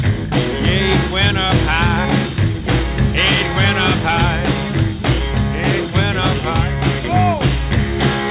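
Aliasing runs through the whole clip: content above 4 kHz was folded back down instead of filtered, leaving gritty, metallic components at roughly 15 dB below the signal. On a spectrogram, energy packs hard against a 4 kHz ceiling, which fits a drop from 48 kHz to 8 kHz.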